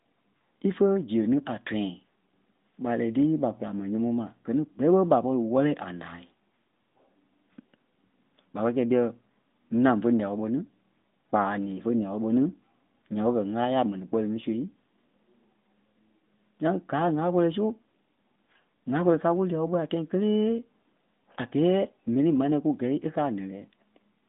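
No technical faults are audible.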